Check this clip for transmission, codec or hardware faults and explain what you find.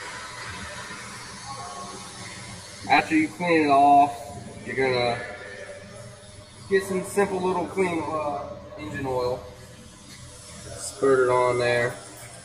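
There's one fault, and it runs through the whole clip: channel delay, giving comb filtering. One channel arrives around 10 ms behind the other, and when the two are folded down to mono, anything they share cancels at regularly spaced frequencies, starting somewhere near 50 Hz and repeating roughly every 100 Hz above that. Those fixed notches carve up the spectrum, so the sound comes across hollow and phasey, with no obvious start or end point.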